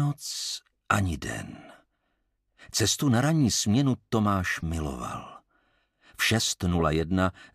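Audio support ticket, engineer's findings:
Short chirp/noise bursts at 4.60–4.63 s and 6.73–6.81 s, peaks about -25 and about -20 dBFS. Corrupt frame decoded: bit errors in compressed frames played anyway, misplacing spectral energy. Decoder input; damage spans a couple of frames, then several.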